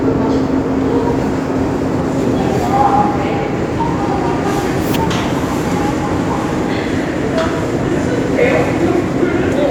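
No technical faults can be heard.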